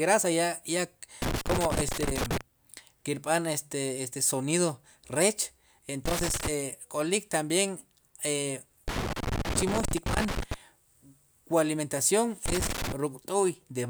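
A worn or dirty contact in the signal path is making and breaking as it moves, giving loose connector crackle in this speech: irregular bursts of scratching chop the signal at 1.22–2.41 s, 6.06–6.48 s, 8.88–10.54 s and 12.46–12.92 s.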